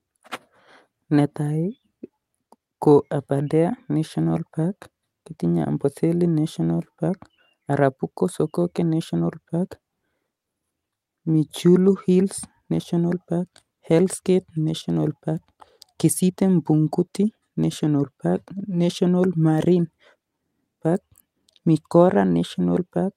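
Clock drift between sender and receiver runs through the whole speech clip, with the sender's clock about 4 percent fast, so the receiver's jitter buffer keeps overfilling. From 0.19 s to 22.80 s, repeated timing corrections trim short pieces to keep pace at 104 percent speed, heard, if at all, as slight, unevenly spaced hiccups or an unsteady tempo.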